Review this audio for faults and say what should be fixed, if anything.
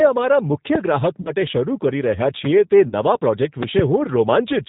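The whole recording carries G.729 codec damage (the G.729A variant at 8 kbit/s), and it is plainly audible. The codec rebuilds speech in 10 ms frames from a vocal-tract filter, a pitch predictor and a few pulses, discarding everything above 4 kHz. The result sounds rough and slightly synthetic. On a spectrogram the energy stops at a hard ceiling near 4 kHz, and harmonics look smeared between frames. To prevent it, use a wideband codec such as Opus or G.722 for this call path.

VoIP packet loss concealed by the speech codec occurs twice: 1.21 to 1.33 s, just before "શરૂ કરી", and 2.88 to 2.94 s. Each gap is about 40 ms of missing audio, which fits two 20 ms packets. The decoder repeats its last pitch and filter with falling gain, so the speech is stretched and fades. Because each frame predicts from the previous one, the voice stays weak for tens of milliseconds or more after the loss. The waveform shows a repetitive, decaying periodic stretch, and the spectrogram shows flat, unnaturally steady harmonics. 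To prevent it, add a larger jitter buffer, forward error correction, or redundant packets on the network link.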